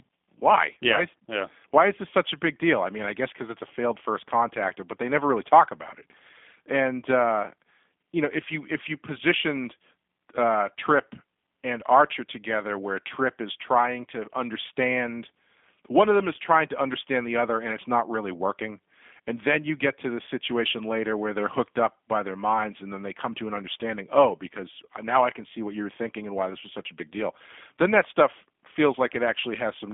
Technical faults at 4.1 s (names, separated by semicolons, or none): G.729 codec